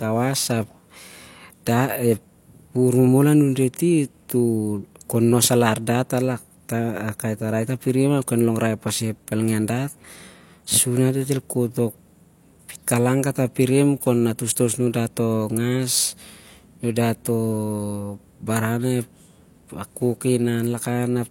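Speech, with one pre-echo fault at 14.52 to 14.56 s: a short hiss rises about 43 ms before a sharp onset. A transform codec spread noise meant for the loud attack across its whole block, so the noise arrives early, unlike reverb or echo, which trail after the sound.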